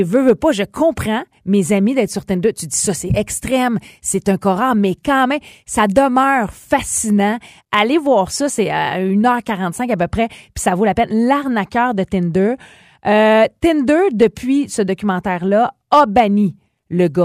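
Hard clipping hits speech peaks at 0.15–0.31 s (before "pas je comprends mes"), 5.80–6.17 s (after "corps mais quand même"), 7.74–7.82 s (before "voir ça c'est à"), 14.22–14.24 s and 15.93–16.20 s. Overdrives of about 2 to 4 dB flatten waveform tops, spraying harmonic streaks upward on a spectrogram, heard as brief crackly harshness.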